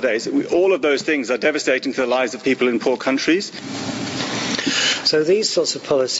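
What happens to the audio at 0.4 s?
Gain pumping is present at 0.4 s, as it is across the whole clip. The level rises and falls with the loudness of the sound itself, a swing of around 25 dB. This is likely a microphone gain set far too high, with a fast limiter or compressor clamping down on every loud moment. Loud and quiet parts sit unnaturally close in level, giving a squashed quality within the 8 kHz bandwidth of the call.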